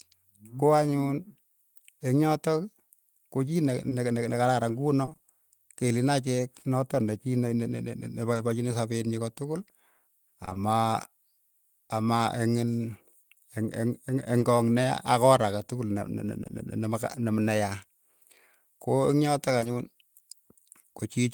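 A speech clip with dropouts in three distinct flavours. From 3.89 to 5.29 s there's a run of repeated packet loss that gives the voice a choppy, robotic edge: seven small holes, none longer than 20 ms, 140 ms missing in all, each patched by extending the last bit of sound. They come close enough together that the fills cover about a tenth of that stretch, so you hear the voice stutter instead of isolated blips. Then there are two patches of scattered short gaps, 8.33 to 10.57 s and 14.39 to 16.51 s. Here the losses are spread out: roughly five holes totalling 100 ms in the first patch, and about three totalling 60 ms in the second, each around 20 ms at most. The concealment covers only a few percent of each span, so the speech stays clear and you just catch the odd tick or smear where the receiver bridged a hole. Finally, right near the end there's short concealed packet loss in two back-to-back pieces, 19.59 to 19.63 s and 19.63 to 19.67 s, each with 20 ms of audio that never arrived in time. 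The decoder carried the previous sound forward and blended back, which comes across as a brief wobble, and a quick consonant there could easily get swallowed.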